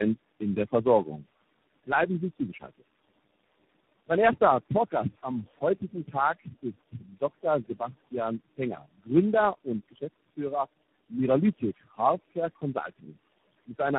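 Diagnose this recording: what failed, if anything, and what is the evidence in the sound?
The codec stage shows tandem speech coding throughout. The audio has nothing above 3.8 kHz and sounds rough, muffled and warbly, with more smearing than a single narrowband coder would leave. That points to several low-rate speech codecs in series, ending in something like 24 kbit/s ADPCM, with decode and re-encode at each link border. Each coder quantises the errors of the one before, so the artefacts compound instead of staying at one codec's level.

Call processing shows speech cut by the noise suppressor in four stretches: 0.18–1.24 s, 1.86–2.81 s, 4.4–9.09 s and 9.64–10.39 s. In each, brief parts of the speech are pulled down by about 11, 17, 17 and 14 dB, so soft sounds come across swallowed or faint. Each of the first two windows loses roughly a sixth of a second. The third loses about half a second and the fourth about a fifth. 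The suppressor misclassified low-level speech as noise and attenuated it along with the room noise, which sits about 22 dB below the speech.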